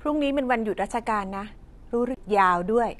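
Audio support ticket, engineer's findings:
CD skip, 2.14 to 2.17 s: laser jumped to another turn of the disc spiral; playback mutes around 30 ms, then speech resumes from a different place.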